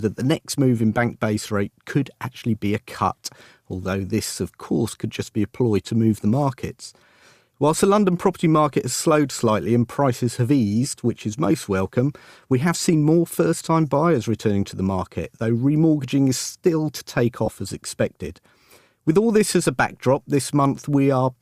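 At 17.46 to 17.48 s, between "is still to take" and "as expected", lost LE Audio frames drop about 20 ms of the Bluetooth stream, fitting two 10 ms LC3 frames. The decoder repeats the last spectrum with scrambled signs, leaving a brief noisy smear.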